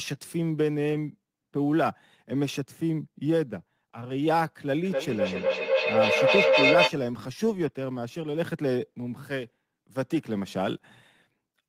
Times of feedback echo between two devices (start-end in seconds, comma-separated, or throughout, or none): 4.84-6.98